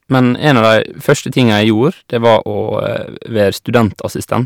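From 0.14 to 1.71 s the speech shows hard clipping. The signal is driven about 6 dB past what the stage can pass. Its peaks are sliced flat. Those flat tops add high harmonics. Loud syllables crackle on their peaks.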